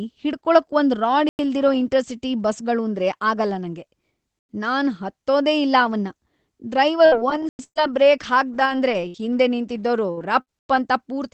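At 1.29 s, just after "ಒಂದ್ ರಾಡ್", and again at 4.39 s, after "ಬಸ್ಗಳೂಂದ್ರೇ ಆಗಲ್ಲ ನಂಗೆ", there is a gap between chunks. Each 3 s chunk is followed by a 100 ms silent hole, though no speech is lost.

From 7.05 to 10.81 s, repeated packet loss sets in. Seven holes, the longest 119 ms, are patched by extending the preceding sound, which makes the speech choppy and robotic.

Inside that stretch, the same 100 ms chunk gaps recur at 7.49 s and 10.59 s, keeping the regular 3.1 s rhythm.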